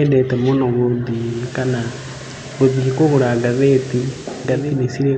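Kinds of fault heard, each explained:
Digital radio blending to analogue: at 1.06 s the receiver loses the digital stream and fades over about half a second to the station's FM broadcast, returning at 4.88 s. Meanwhile there is hiss roughly 20 dB down; level is unchanged.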